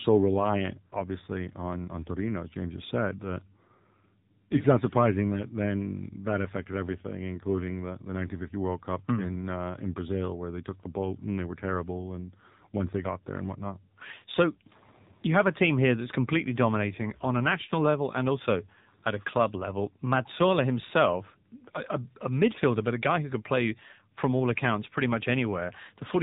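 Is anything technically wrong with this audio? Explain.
Yes. Throughout the speech, the audio carries the sound of the AMR narrowband mobile codec. This phone codec rebuilds the voice from a vocal-tract model fed by sparse pulses in each 20 ms frame. The thin, buzzy, synthetic quality fits a low mode of about 7.4 kbps. A spectrogram shows a hard ceiling at 3.8 kHz with nothing above it, and smeared, blocky harmonics. The waveform looks smoothed, with softened consonant bursts.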